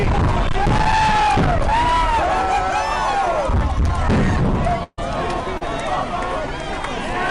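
A burst of packet loss runs from 4.83 to 4.99 s. About 140 ms of audio arrived too late or not at all. The receiver carried the last sound forward and faded it into 30 ms of silence, then resumed further on with that stretch skipped.

Short concealed packet loss follows at 5.57 to 5.63 s. Roughly 40 ms never reached the decoder in time, and a 33 ms gap was filled by extending the preceding sound before blending back into the real audio, heard as a brief smear.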